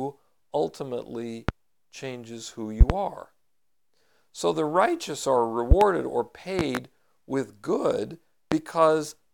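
Loud pops strike the speech five times: single pops at 1.49–1.52 s and 8.52–8.55 s, and double pops at 2.81–2.94 s, 5.71–5.85 s and 6.59–6.79 s. Each is a sharp thump peaking roughly 20 dB above the speech, which continues underneath. A sudden voltage step or pulse, likely from a plug, switch, static discharge or driver glitch, has entered the signal path and been shaped by the circuitry downstream.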